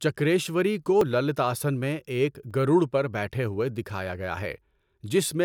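At 1.01, 2.51 and 4.46 s the speech jumps ahead, each time losing about a hundredth of a second, most likely a dropped buffer (overrun). The waveform shows an abrupt step at each join, and the spectrogram a thin full-height vertical line.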